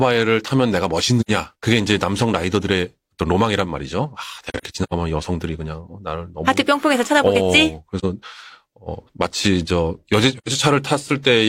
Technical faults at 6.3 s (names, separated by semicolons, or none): none